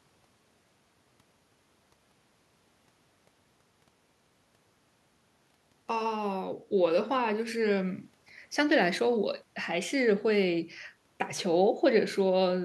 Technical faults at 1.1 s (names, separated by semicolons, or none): none